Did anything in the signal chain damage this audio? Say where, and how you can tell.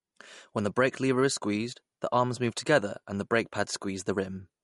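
Yes, at the codec stage, and it runs through the whole speech clip. Nothing is left above 11.2 kHz, and the damage is plainly audible: a watery, swirly texture where weak frequency lines flicker on and off between frames. That points to MP3 compression, likely at a low bitrate around 48 kbps, where the encoder drops treble and faint detail to save bits. A plain low-pass filter would also remove the top, but it wouldn't produce the swirl.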